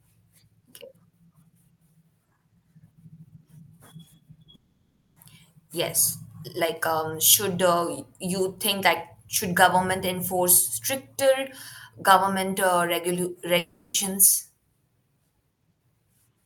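Speech with a likely long network dropout at 4.55–5.17 s and 13.58–13.95 s: lost audio is replaced by a fading buzz, briefly silent in the first.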